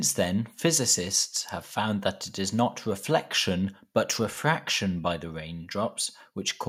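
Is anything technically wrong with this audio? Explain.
No, nothing technically wrong can be heard in this speech recording. No audible fault turns up anywhere in it.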